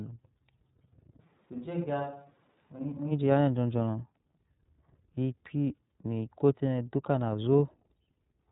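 Throughout the speech, iLBC codec damage is plainly audible: a rough, slightly synthetic texture from coding each block independently, consistent with 30 ms frames at 13.33 kbps. The spectrogram shows nothing above 3.8 kHz.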